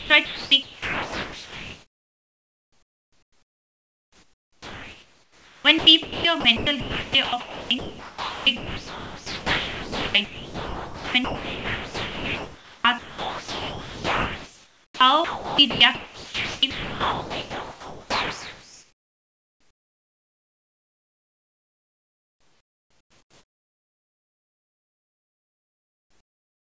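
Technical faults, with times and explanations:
Throughout, sound chopped by the voice detector: about 24.4 s of the speech is replaced by smooth synthetic hiss. Syllables and word edges drop out, and the real room noise sits about 34 dB below the speech. The likely cause is the sender's voice activity detector repeatedly mistaking speech for silence and sending comfort-noise parameters instead of audio, which the receiver renders as shaped noise.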